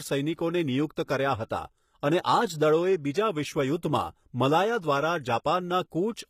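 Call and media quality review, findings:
Throughout the speech: thin top end, nothing above 14.9 kHz despite the high-bitrate MP3 wrapper. Likely low-bitrate audio saved at a high bitrate. Fits an earlier very low-rate HE-AAC pass, near 20 kbit/s; the re-encode cannot restore the removed detail.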